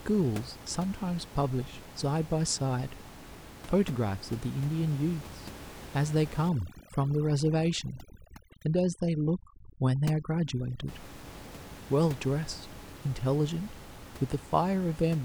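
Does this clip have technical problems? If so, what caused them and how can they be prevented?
Yes. From 6.49 to 10.88 s there is overdone noise removal: bands near the noise estimate are cut away, leaving near-silent gaps with twinkling specks, and quiet parts of the voice are lost with them. A spectrogram shows scattered isolated dots and holes. Use gentler reduction settings, since the room noise sits about 17 dB below the speech.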